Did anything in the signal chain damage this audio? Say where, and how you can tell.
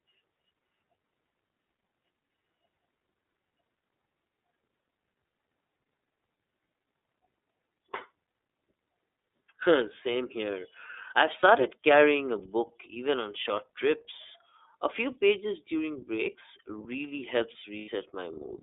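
Yes. Codec stage: iLBC codec throughout, speech band-limited to roughly 300 Hz–3.6 kHz; the spectrogram shows nothing above 4 kHz, and the rough, synthetic texture fits about 13 kbps with 30 ms frames.

Network stage: lost iLBC frames at 11.40–11.43 s (30 ms) and 17.79–17.89 s (90 ms). The decoder repeats the last pitch cycle with noise, giving a held buzzy vowel that shows as flat, smeared harmonics, the longer one fading.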